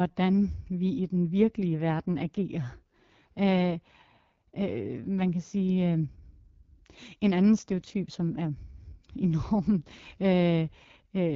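Throughout the speech, AMR wideband (HD Voice) coding leaves the voice rough and raspy, which fits its low 8.85 kbit/s mode. Unlike narrowband telephone audio, the band still reaches 7 kHz, but the region above 6.4 kHz is filled with shaped noise rather than true detail.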